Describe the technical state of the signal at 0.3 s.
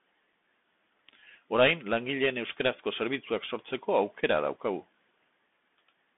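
At 0.33 s a single unconcealed Bluetooth headset packet loss cuts a gap of about 3.8 ms into the speech. One short voice packet between headset and phone went missing, and nothing was filled in to cover it. The hole has abrupt edges, and the speech resumes quieter for a moment as the CVSD step size rebuilds. Because it is one isolated dropout, it reads as a brief hole, not the rough crackle of repeated losses or a codec's steady smearing.

Underneath, the whole clip, this moment included, carries the Bluetooth CVSD headset codec. Each sample is coded as a single up-or-down bit with an adapting step, which fits a 64 kbps link. The band runs only from about 200 Hz to 3.5 kHz, so the speech sounds thin and telephone-like. There is a granular hiss beneath it, and sibilants turn scratchy where loud high content outruns the step. Unlike a simple low-pass, this damage is plainly audible as grit and slope distortion, not just dullness.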